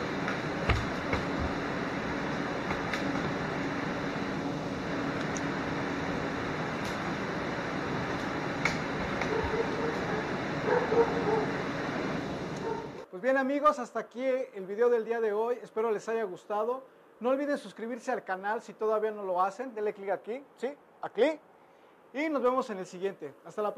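Nothing here sounds wrong technically, so there's no fault to time or trace back to a cause.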